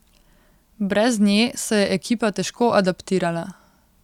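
No technical faults can be heard anywhere in this speech recording.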